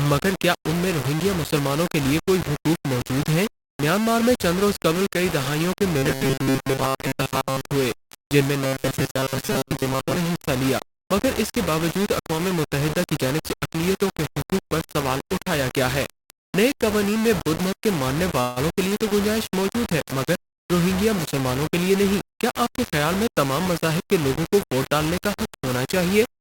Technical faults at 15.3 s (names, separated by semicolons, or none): low bit depth without dither